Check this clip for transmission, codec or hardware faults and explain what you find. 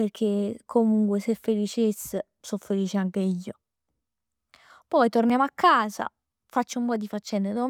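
Two brief blocks of digital silence occur, at 5.30 s, just before "a casa", and at 6.96 s. Each is heard as a small tick rather than a gap, because the dropout lasts only about 0.5 ms and 0.29 ms respectively. At each point a run of samples was replaced by zeros, most likely because the output buffer was not filled in time, and the speech drops to silence and returns with no fade.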